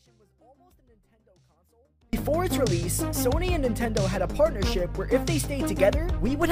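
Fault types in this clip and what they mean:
Audio dropout to a faint residue, 0 to 2.13 s: the clip opens with the signal already lost, leaving only a faint leak of the sound roughly 35 dB below its normal level. At 2.13 s it snaps back to full level abruptly, with no fade. The likely cause is a break in the wanted signal while the path after the break stayed live, so only this low residue came through.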